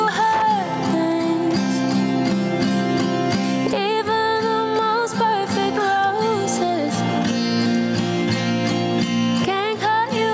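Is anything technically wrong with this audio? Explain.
Yes, there are two faults.

Gain pumping runs through the whole clip. The input gain is likely set far too high for the microphone, so a fast limiter or compressor has to pull the level down every time something loud arrives and release it again in the gaps. The result is a gain swing of around 15 dB, and the dynamic range sounds squashed.

Loose connector crackle appears from 0.33 to 0.70 s. A worn or dirty contact in the signal path is making and breaking connection very rapidly, chopping the audio on and off, with small pops where any DC offset on the line jumps. For that third of a second it sounds like an irregular scratchy burst of crackle over the sound, which then stops. The call microphone processing, which leaves nothing above 8 kHz, is working as intended and is not part of either problem.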